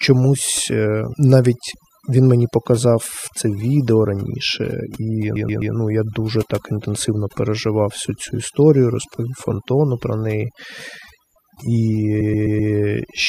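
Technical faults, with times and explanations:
Throughout: overdone noise removal. The denoiser is pushed hard enough that whole frequency bands get switched off along with the noise, so the background drops and breaks into twinkly specks, and the quieter parts of the voice go with it.
5.36–5.74 s and 12.21–12.72 s: repeated frames. Right after "це відео раніше і" and before "ну я дуже так", a 128 ms chunk of compressed audio plays three extra times, adding 384 ms. Near the end the same thing happens with four extra plays, adding 512 ms. Both come out as a stutter.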